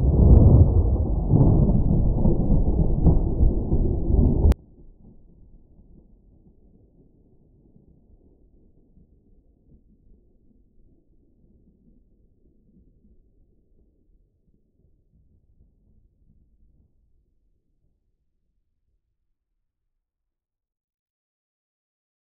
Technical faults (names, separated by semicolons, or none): one channel inverted